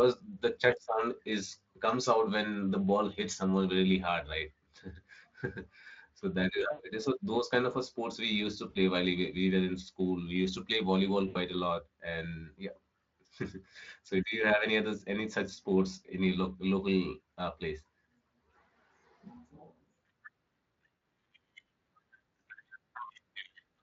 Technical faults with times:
6.71-6.83 VoIP packet loss concealed by the speech codec
8.69-8.77 VoIP packet loss concealed by the speech codec
11.27-11.37 VoIP packet loss concealed by the speech codec
20.97 VoIP packet loss concealed by the speech codec

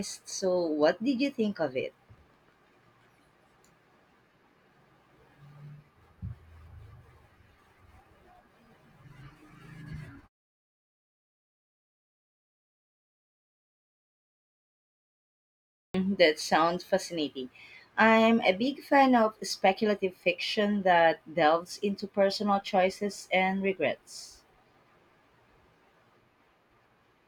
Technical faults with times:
15.81-15.94 clipped start after a pause

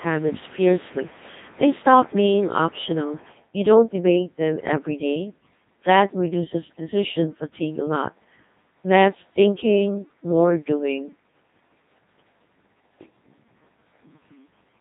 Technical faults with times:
0.00-14.80 Codec 2 vocoder
6.62-6.91 bit errors on digital voice radio

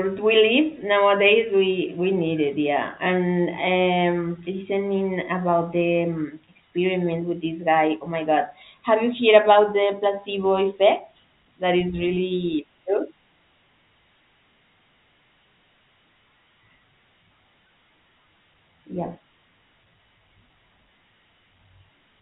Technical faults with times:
none

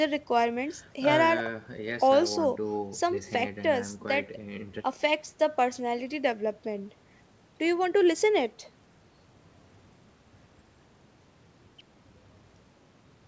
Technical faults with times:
none

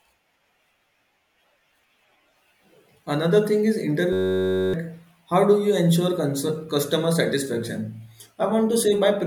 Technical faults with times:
4.13-4.74 system hang loop

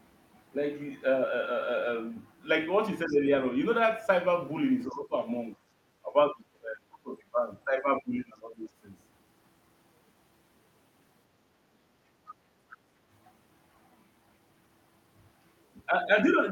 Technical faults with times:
3.07-3.27 speech suppressed in double talk
3.08-3.12 other side's voice leaking through
4.90-4.96 other side's voice leaking through
4.90-5.13 speech suppressed in double talk
6.04-7.39 speech suppressed in double talk
7.65-8.58 speech suppressed in double talk
12.26-12.35 other side's voice leaking through

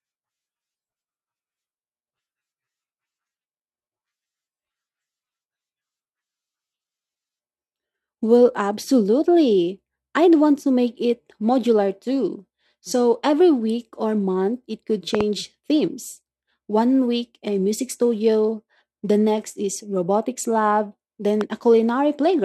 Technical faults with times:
15.15-15.23 loud pop
21.41-21.43 loud pop

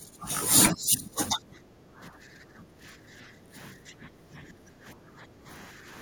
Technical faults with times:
0.00-0.29 speech suppressed in double talk
0.72-1.41 speech suppressed in double talk
1.69-3.54 background gated by the echo canceller
3.87-3.93 speech suppressed in double talk
4.23-5.46 background gated by the echo canceller

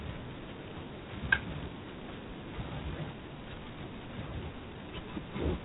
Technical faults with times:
0.00-5.64 G.726 ADPCM

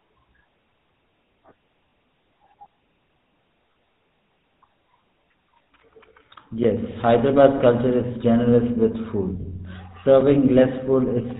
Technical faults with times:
0.00-11.39 GSM full-rate codec
1.90-1.92 lost GSM frames
4.13-7.75 CD scratch ticks
5.64-5.66 lost GSM frames
7.58-7.61 lost GSM frames
9.42-9.54 lost GSM frames

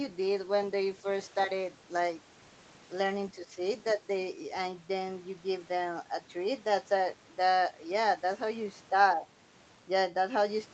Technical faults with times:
3.34-3.61 speech suppressed in double talk
3.87-3.93 other side's voice leaking through
3.95-4.02 speech suppressed in double talk

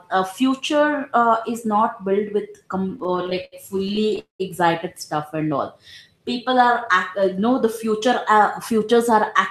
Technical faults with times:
2.89-4.19 repeated stalls (stutter)
4.19-4.42 call audio freeze
5.36-6.66 jitter buffer slow-down

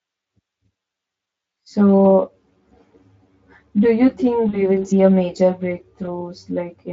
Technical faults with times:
0.00-6.92 channel delay (comb filtering)
4.49-4.63 VoIP packet loss concealed by the speech codec
6.05-6.08 VoIP packet loss concealed by the speech codec

